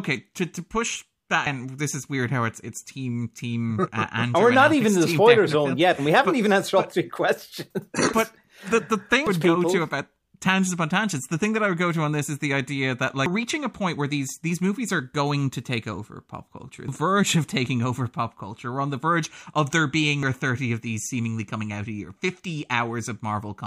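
At 13.26 s and again at 20.23 s the speech is hit by damaged data in a compressed stream: corrupted bytes make the decoder lose frame sync and hunt for the next header, giving a brief chirp or blip. A spectrogram shows a thin broadband smear at each point. The waveform shows an abrupt discontinuity there.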